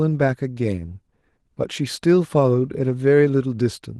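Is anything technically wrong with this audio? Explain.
No, nothing in this speech clip is technically wrong. It carries Opus voice compression in its full-band hybrid mode, and the coding leaves only light traces on the sound.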